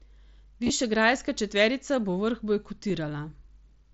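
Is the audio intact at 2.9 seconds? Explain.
No. At 2.89 s, just after "četverica bo vrh", there is a concealed Bluetooth headset packet loss of about 7.5 ms, which fits a single lost packet. The receiver patched it with a matching stretch of the preceding waveform. A plain dropout would leave a silent gap or click. Here the sound carries on almost seamlessly, with no buzzy held tone.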